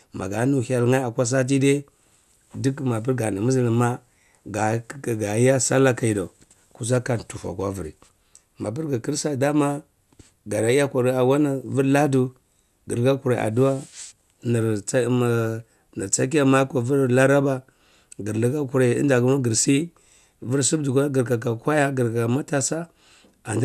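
No technical faults are audible anywhere in the audio.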